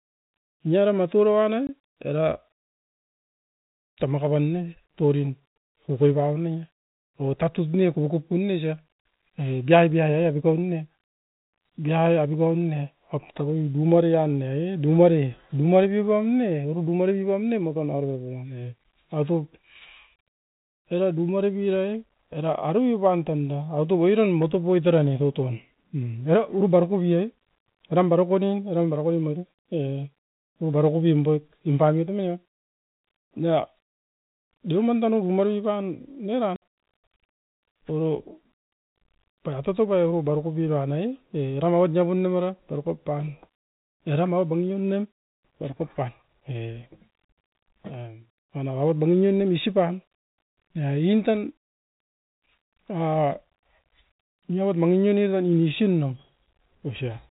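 Packets went missing in transit on this speech recording, and the receiver played silence where they should have been. This packet loss filled with silence cuts two hard-edged holes, one of about 20 ms from 1.67 to 1.69 s and one of about 60 ms from 36.56 to 36.61 s, which fits whole 10 ms packets dropping out. Each gap starts and stops abruptly, in a G.711 telephone-band signal that stops at 4 kHz.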